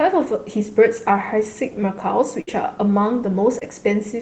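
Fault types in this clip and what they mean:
Burst of packet loss: At 2.41 to 2.49 s, packets went missing. The receiver stretched and faded the last sound for 57 ms, then jumped ahead 60 ms.
Short concealed packet loss: From 3.59 to 3.63 s, 20 ms of speech arrived too late. The receiver patched it by continuing the preceding sound, leaving a brief smear.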